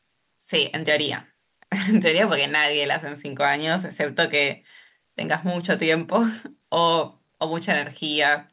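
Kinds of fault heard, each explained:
Nothing stood out on listening to this speech clip, which came through a call path with nothing above 4 kHz.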